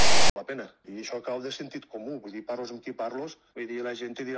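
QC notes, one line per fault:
0.00–0.36 s, file tags played as audio: the decoder read the file's text tag block and its zero padding as if they were samples, so the clip opens with a loud, hard-edged rasp offset to one side, then drops to dead silence where the padding sits.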